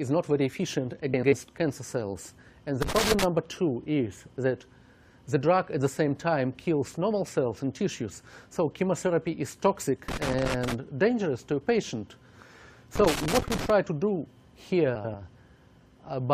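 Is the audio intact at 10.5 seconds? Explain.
No. At 10.5 seconds the sound sits inside a burst of loose connector crackle running from about 10.08 to 10.74 s. A worn or dirty contact is making and breaking intermittently, chopping the signal, so it comes through as irregular scratchy crackle for that stretch.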